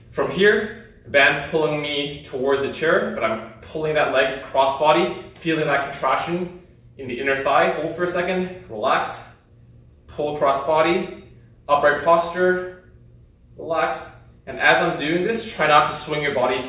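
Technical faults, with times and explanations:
Nothing stood out as a technical problem on listening.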